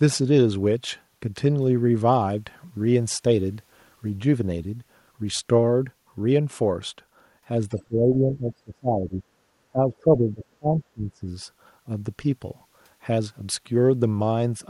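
From 7.69 to 7.84 s a faint second voice slips in underneath the talker, well below the main speech and gone almost at once. This is the other side's voice leaking through: the far end was likely playing on a loudspeaker, and the echo canceller let a short scrap of it back into the microphone.

Right after, from 7.78 to 9.26 s and again from 9.70 to 11.24 s, the talker's own voice sinks sharply, losing much of its level for about a second and a half each time, before recovering in between and afterwards. This is speech suppressed in double talk: with both sides likely talking at once, the canceller could not tell the local voice from the echo and pulled everything down together.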